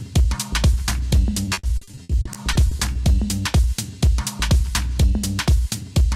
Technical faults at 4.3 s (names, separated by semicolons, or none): none